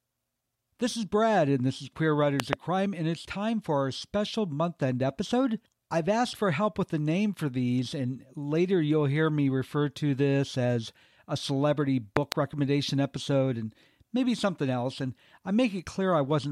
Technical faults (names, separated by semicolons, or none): loud pop